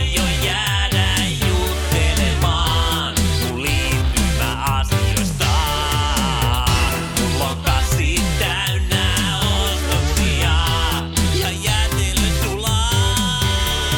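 From 1.46 s to 6.90 s a steady ticking sits underneath the audio, repeating roughly ten times a second and staying well below the main sound, around 25 dB down. This is Wi-Fi interference. A nearby Wi-Fi radio sends a beacon every 102.4 ms, and the audio circuitry picks up that radio energy and rectifies it into audible clicks, so the timing of the transmitter is what gives the ticking its even, clock-like rate.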